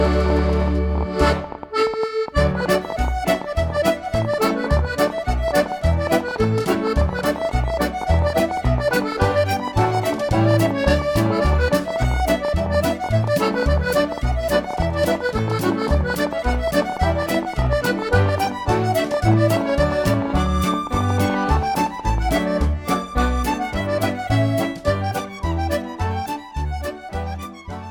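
A train of clicks runs from 0.06 s to 22.19 s: roughly 300 alike pops, unevenly spaced at 11.8 per second and peaking a few dB over the sound, likely from interference or a faulty connection or power supply. Spectrograms show thin vertical broadband lines; waveforms show sharp spikes.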